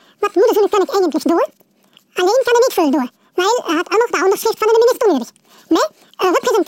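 From the first moment to the end, the audio is read two samples at a time, so it plays at double speed (2x) and sits a full octave (12 semitones) high. The reader treats each pair of samples as one frame, as if the data held two channels or wider samples, and skips half the stream.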